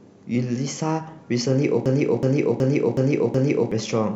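From 1.86 s to 3.72 s the speech turns into a mechanical stutter: one 0.37 s fragment repeats five times at about 2.7 per second. This system hang loop means the system froze while playback kept cycling one buffer, which fits 16384 samples, losing roughly two seconds of audio.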